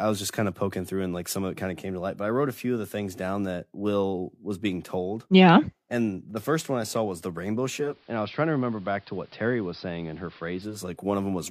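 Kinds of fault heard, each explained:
Digital radio blending to analogue: after "saw was the rainbow", the speech dulls, drops about 2 dB and gains faint hiss until 11.01 s. A hybrid receiver lost its digital signal and cross-faded over 0.41 s to the AM broadcast.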